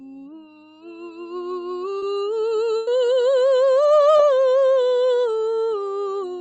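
Music, carried over a call path whose microphone processing limits the content to nothing above 8 kHz, with a noise suppressor applied to music or sounds running for the whole clip. The suppressor, built for speech, treats sustained tones, ambience and decays as noise and pulls them down, so level swings by around 10 dB as attacks pass and held material sinks, giving a pumping, thinned texture. The worst sound cut by the noise suppressor comes from 0 to 1.32 s, where steady content drops by about 17 dB and tails end early. A short concealed packet loss at 1.98 to 2.03 s leaves about 40 ms missing, bridged by 33 ms of extrapolated audio that smears briefly before blending back. A second one at 4.17 to 4.20 s loses about 20 ms, 19 ms of it concealed, heard as a brief wobble. A burst of packet loss at 2.77 to 2.88 s removes about 100 ms. The receiver extends the last sound for roughly 101 ms and fades it out, with no silent gap, so the audio resumes further on with that section skipped.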